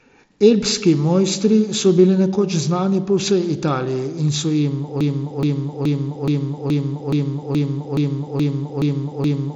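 At 5.01 s, just after "in so jim", the player or stream likely stalled and kept resending its last held fragment, producing a broken-record loop. A 0.42 s slice repeats exactly, back to back, eleven times to the end, and the speech that should follow is lost.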